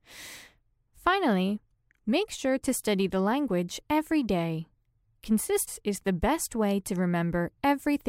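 Damaged data in a compressed stream appears at 5.67 s as a sudden glitch lasting only about 18 ms. At that point part of the encoded stream was wrong, with bytes lost, zeroed or overwritten, so the decoder could not read the affected frame correctly. It lost sync and had to search for the next valid frame header, and that brief misread breaks the sound as a short, sharp blip or chirp.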